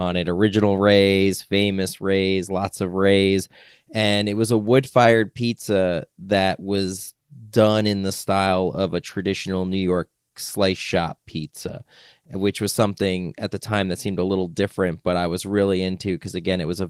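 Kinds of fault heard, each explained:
No faults can be heard in this speech clip. The Opus voice compression keeps the full audio band, and the faint coding traces fit its hybrid mode, with a CELT layer carrying the upper frequencies above the SILK speech coder.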